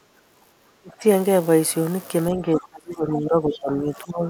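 A speech clip in which the talker's level repeatedly sinks while someone else seems to be talking. This is speech suppressed in double talk. It happens from 0.16 to 0.44 s, from 0.78 to 1.05 s, and from 2.31 s to the end. The drops reach around 15 dB, 25 dB and 20 dB. The last stretch is the longest, about two seconds. The likely cause is an echo canceller that could not tell the near voice from the loudspeaker echo, so it turned both down. At 3.53 to 3.59 s a brief scrap of a second voice comes through. This is the other side's voice leaking through, roughly 15 dB below the talker. It is short and faint. The likely cause is loudspeaker sound that reached the microphone and was not fully removed by the echo canceller.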